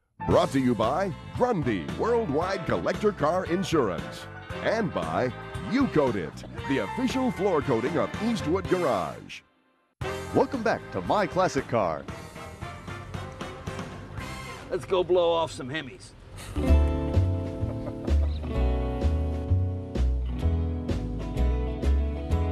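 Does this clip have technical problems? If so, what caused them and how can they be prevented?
Yes. A corrupt frame was decoded from 6.43 to 6.46 s. Damaged bits in a single frame produced a brief misplaced burst peaking around -30 dBFS. Prevent it with checksums and concealment of damaged frames.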